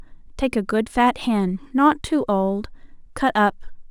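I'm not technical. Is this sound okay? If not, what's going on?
No. There is a fault called sample clock jitter running all the way through this speech recording. The timing clock in the recording equipment wobbles by roughly a couple of millionths of a second, so each tiny snapshot of the sound is taken slightly early or late. That adds a faint hiss or grittiness that gets stronger on loud and sharp, bright sounds. Unlike ordinary background hiss, it disappears completely in the pauses.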